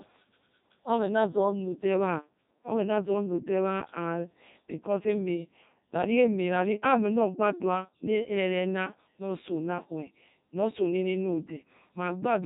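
The speech has passed through a Codec 2 vocoder, consistent with its 3.2 kbit/s mode, which discards the waveform and rebuilds it from sine waves, leaving a robotic, buzzy voice throughout.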